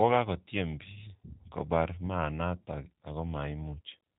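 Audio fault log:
throughout G.729 codec: speech stops at 3.8 kHz and sounds rough and synthetic, rebuilt from sparse pulses at what fits 8 kbit/s, unlike a clean low-pass filter.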